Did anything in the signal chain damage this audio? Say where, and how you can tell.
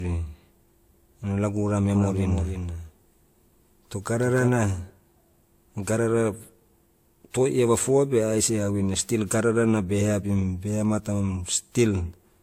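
Yes, at the codec stage and at a point where two copies of the audio were combined.

The whole 12-second speech clip has a layered lossy texture, with swirly, smeared high frequencies and extra grit on top, and nothing above 16.6 kHz. That combination of two distinct artefact flavours points to transcoding between lossy codecs, likely a low-rate Vorbis encode of around 49 kbit/s re-encoded to WMA at about 96 kbit/s. The second encoder spent its bits preserving the first one's damage, added its own, and the earlier band limit was kept.

From 1.95 s to 4.49 s, a second, full-band copy of the speech runs about 300 ms behind and about 5 dB quieter. It has no reverberant tail or room colour, and it cuts in and out abruptly at those times. That is a doubled audio track, with the identical signal mixed in twice, likely through a slower capture path or an edit that left two offset copies overlapping. 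A true acoustic echo would decay and be coloured by the room.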